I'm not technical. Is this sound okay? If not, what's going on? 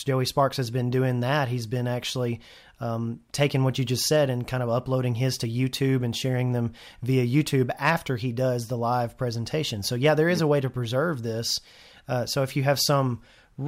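Yes, the speech recording checks out with nothing technically wrong found anywhere in it.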